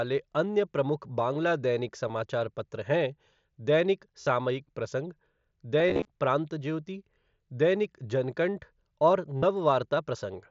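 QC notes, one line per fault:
2.08–9.43 s, concealed Bluetooth headset packet loss: packets dropped at 2.08 s, 4.21–4.27 s, 5.80–6.05 s (scattered, runs up to 30 ms) and 9.38–9.43 s. The phone filled each gap by repeating the best-matching recent waveform stretch, giving a held buzzy tone and a slight warble as real audio resumes.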